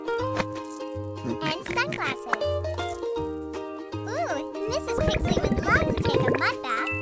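From start to end, a resampler restarted on every block: each 10 ms block is converted in isolation, so its edges lack true neighbouring samples. The resulting edge errors recur at 100 Hz, heard as a buzz riding on the signal, consistent with a 24 kHz to 16 kHz conversion.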